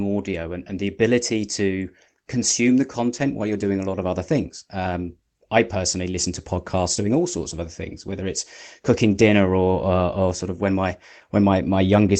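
Nothing goes wrong anywhere in this bit of speech; it simply sounds like a normal call, with the top end rolling off around 8 kHz the way a call codec set to that bandwidth would shape it.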